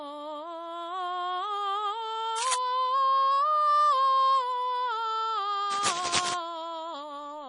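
Throughout the music, the treble stops dead at 10.5 kHz and faint detail swirls in and out, leaving a watery, smeared sound with metallic chirps. This is likely heavy MP3 compression, fitting a bitrate near 32 kbps. A spectrogram shows a hard ceiling with flickering holes below it.

From 2.38 to 2.57 s and again from 5.71 to 6.34 s, rough rustling bursts sit just below the music's level. This is likely cable scratch noise, from a worn contact whose resistance jumps as it moves. The waveform shows jagged, irregular spikes, and the spectrogram shows broadband speckled smears.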